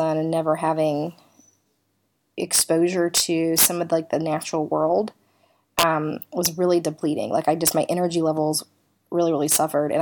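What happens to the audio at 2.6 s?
A violent crack cuts through the speech from 2.55 to 2.61 s, much harsher than ordinary clipping. This is integer overflow: the loudest peaks, pushed about 2 dB past the largest representable value, wrapped around to the opposite extreme instead of being held at the limit.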